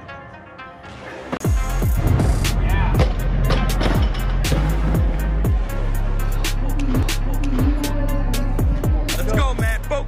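At 1.37–1.40 s and 7.02 s, CD skips: brief mutes (about 30 ms, then barely any) and ticks, after which playback resumes elsewhere on the spiral, unlike a dropout.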